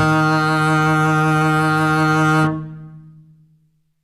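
Throughout the music, the treble has a synthetic, gritty sheen: the top end sounds metallic, with the highs lisping, and nothing above 14.9 kHz. This points to HE-AAC compression, likely at around 24 kbps, with treble regenerated from copied lower bands whose harmonics no longer align.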